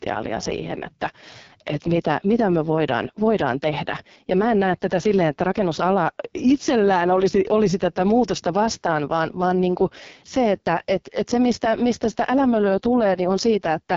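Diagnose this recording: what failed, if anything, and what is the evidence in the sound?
AMR wideband (HD Voice) codec damage runs through the whole clip, a codec-stage fault. The speech sounds rough and raspy, with nothing above 7.4 kHz. That heavy roughness points to AMR-WB's lowest rate, about 6.6 kbit/s, where too few bits reach the pulse-driven vocal tract model to rebuild the speech cleanly.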